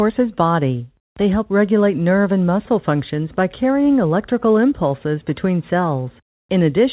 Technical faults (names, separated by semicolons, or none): none